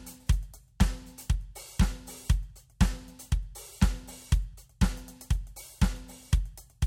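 Two devices likely running on separate, unsynchronised clocks drift apart by roughly 100 parts per million, forcing one sample to be dropped or repeated about every fifth of a second. From 0.19 s to 6.84 s, this gives clock slip clicks: around thirty faint, evenly spaced ticks through the music.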